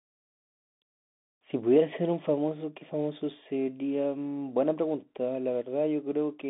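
Bluetooth CVSD headset codec, present from start to finish. The speech has passed through a narrowband headset link whose sound fits a 64 kbit/s CVSD stream. Each sample is coded as a single up or down step whose size adapts, so loud, fast-changing sounds outrun the step and break up. The line carries only about 200 Hz to 3.6 kHz, with nothing above 3.7 kHz. The damage is plainly audible: s sounds turn scratchy, and a granular hiss sits beneath the speech.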